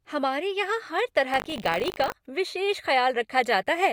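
Buffer tearing runs from 1.32 to 2.13 s. The program writing the playback ring buffer and the hardware reading it cross every period, splicing a small slice of speech from roughly 70 ms earlier into each cycle. The hard joins make a robotic 50 Hz buzz, which fits a 20 ms buffer.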